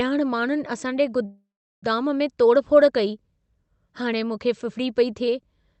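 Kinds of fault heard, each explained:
Call audio freeze: From 1.25 to 1.85 s the sound stalls and a fading buzz or hiss fills the gap, then about 0.38 s of silence. The likely cause is delayed packets draining the jitter buffer. Nothing is lost. Later audio resumes 0.57 s late.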